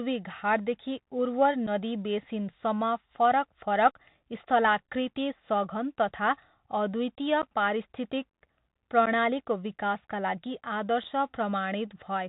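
The speech runs through a Bluetooth CVSD headset codec throughout. Nothing passes above 4 kHz, s sounds turn scratchy, and granular hiss sits underneath, which fits a 64 kbps link. Unconcealed Bluetooth headset packet loss follows at 1.67 to 1.69 s, 7.42 to 7.47 s, 9.06 to 9.08 s before "विकासका लागि", and 11.04 s after "विकासका लागि". Each gap is about 8 to 11 ms, two or three packets' worth. The holes have abrupt edges, then speech resumes briefly quieter.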